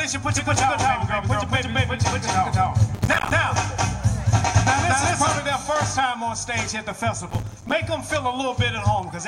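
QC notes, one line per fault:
0.37–5.39 s, doubled audio track: an equally loud dry copy trails by about 200 ms, starting and stopping abruptly, likely a second capture path, not a decaying echo.
2.95–3.32 s and 7.30–7.72 s, processor overload crackle: dozens of tiny silent gaps, fitting buffers of around 5 ms, give a gritty tearing rather than one clean dropout.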